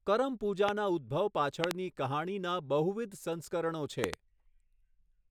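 Speech with three loud pops cutting sharply above the voice at 0.69–0.71 s (single), 1.64–1.73 s and 4.04–4.16 s (both doubled), peaking around 20, 25 and 20 dB over the speech, which continues beneath. They likely come from sudden voltage pulses, such as connector, switch or static discharges.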